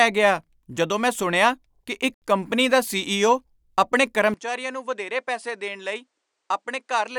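At 4.34 s the speech suddenly changes character and stays that way to the end. Everything above about 10.2 kHz disappears, so the top end goes dull, the level drops by roughly 10 dB, and a new, faint background noise comes in around 50 dB under the speech. There's no gap at the changeover. That abrupt shift in bandwidth, level and noise floor is what an input switched to a poorer device likely sounds like.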